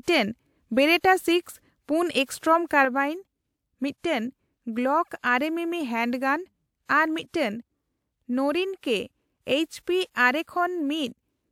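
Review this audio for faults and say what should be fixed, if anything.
Sudden gain jump at 2.85 s, right after "ᱯᱩᱱ ᱮᱥᱴᱚᱨᱚᱢ": the speech and the background noise drop together by about 5 dB in a single step and stay lower to the end. A digital gain change applied without a ramp is the likely cause. To prevent it, apply gain changes with a short smoothing ramp rather than switching between samples.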